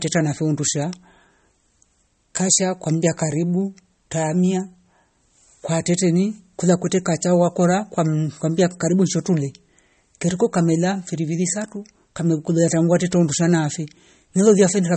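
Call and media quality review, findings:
Likely MP3 compression, fitting a 32 kbps bitrate: treble cut off at 8.4 kHz, weak spectral lines flickering frame to frame, speech watery and swirly throughout.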